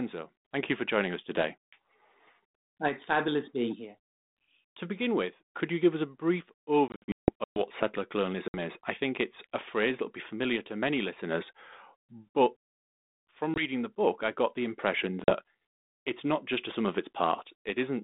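Packet loss on an ADPCM call cuts hard-edged silent holes into the speech. The worst comes just after "give us a brief", from 6.88 to 7.63 s: about 460 ms goes missing in bursts, the longest 160 ms, from some twenty lost packets. Shorter gaps fall at 8.48 s (60 ms, before "is I think it's"), 13.54 s (20 ms, before "the book I got") and 15.24 s (40 ms). Each hole was filled with silence, which threw the decoder's adaptive predictor and step size out of step with the sender's, so speech resumes at times with a click or at the wrong level and sounds distorted for some tens of milliseconds until they realign. The 32 kbit/s G.726 link carries the speech in a 200 Hz to 3.7 kHz band.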